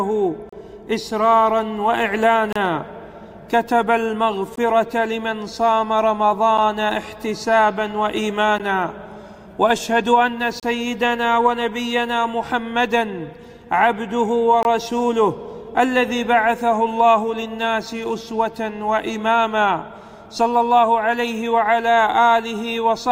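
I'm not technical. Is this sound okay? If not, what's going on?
No. The sound briefly drops out to complete silence seven times, in short, sharp-edged holes: at 0.49–0.53, 2.53–2.56, 4.56, 6.58, 8.58, 10.60–10.63 and 14.63–14.65 seconds. Each lasts between about 8 and 32 thousandths of a second. This is a gap between stream segments. The audio arrives in 2-second pieces, and where the timing of neighbouring pieces doesn't quite line up, the player fills the space with silence. Nothing is actually missing.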